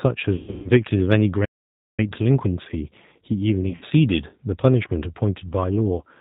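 Throughout, the speech sounds slightly rough and synthetic, with a dull top and nothing above 4 kHz. That is the G.729 codec at 8 kbit/s, which rebuilds each 10 ms frame from a vocal tract filter, a pitch predictor and a few pulses, and its damage is plainly audible here.

From 0.36 to 0.71 s the sound smears into buzzy or noisy, fading stretches, and it stays weak briefly after each one. This is VoIP packet loss concealed by the speech codec. About 260 ms of audio is lost across 280 ms, with the longest gap 140 ms, which fits roughly thirteen missing 20 ms packets. The decoder extrapolates from its last pitch and filter while lowering the gain.

From 1.44 to 2.00 s the sound simply stops mid-flow for about 530 ms and then resumes. This is a playback stall, most likely the player running short of data or being blocked until it recovered.

The same concealed packet loss returns from 3.61 to 3.85 s. 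Here 120 ms is lost over 200 ms, with the longest run 60 ms, and the sound again turns buzzy or noisy and faint as the extrapolated frames decay. A last, brief instance at 5.98 to 6.02 s covers a single lost 20 ms stretch.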